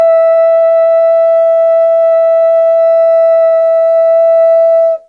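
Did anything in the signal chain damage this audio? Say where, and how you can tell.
No, nothing along the chain seems to have harmed this music, and I can't hear any sign of damage at any stage.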